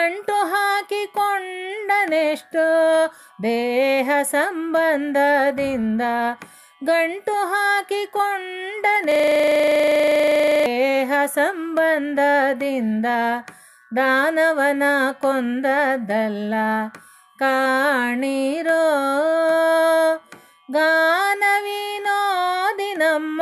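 A system hang loop runs from 9.12 s to 10.66 s. The playback system stalled while the sound hardware kept reading the same stretch of its ring buffer, so one 40 ms slice of audio repeats exactly, about 39 times in a row. At a repeat rate of 25 Hz, the loop is too fast to hear as separate hits. It comes across as a rough, rattling buzz that holds a fixed tone until normal playback resumes.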